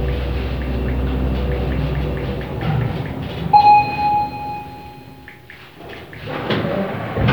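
No technical faults are audible anywhere in this audio.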